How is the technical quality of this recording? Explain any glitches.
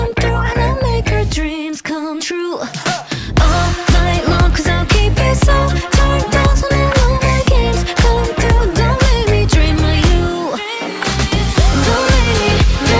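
The recording has one glitch. From 1.2 to 4.6 s, a resampler restarted on every block, converting 48 kHz to 16 kHz in 100 ms pieces, each with a small error at its edges. The result is ticking at 10 Hz, present only when sound is, unlike a hum that persists through silence.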